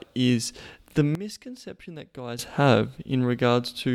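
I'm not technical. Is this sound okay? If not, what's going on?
No. Sudden gain jump at 1.15 s, after "is the": speech and background abruptly get much quieter until 2.39 s, likely from a volume change applied instantly without fading.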